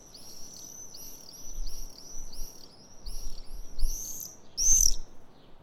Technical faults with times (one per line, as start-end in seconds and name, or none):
none